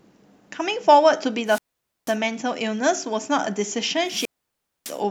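Wireless microphone squelch dropout at 1.45 to 2.17 s and again at 4.04 to 5.01 s: the speech fades into rising hiss as the radio link weakens, then the receiver mutes for about 490 ms and 610 ms respectively before the signal recovers.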